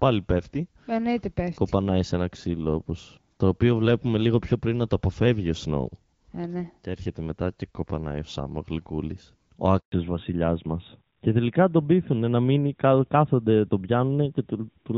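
A speech recording carried over a phone call breaks into a handover gap at 9.80 s. The sound falls away over a few tens of milliseconds and stays silent until 9.92 s, a hole of about 120 ms. That points to the call being switched between networks while no speech frames reached the receiver, so whatever was said across that moment is simply missing. From 9.92 s to the end, the call shows a fallback to narrowband. Before the switch the audio has HD Voice bandwidth with only light coding texture, which fits AMR-WB at about 12.65 kbit/s. After it, everything above 4 kHz is gone, and the speech becomes duller and somewhat rougher. This is consistent with the codec dropping to AMR narrowband at about 12.2 kbit/s as the new link came up.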